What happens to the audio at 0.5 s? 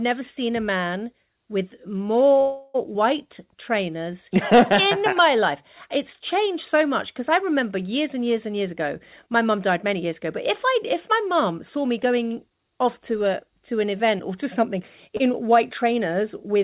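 Nothing goes wrong at 0.5 s; the speech comes through intact, carried by a narrowband call path that leaves nothing above 4 kHz.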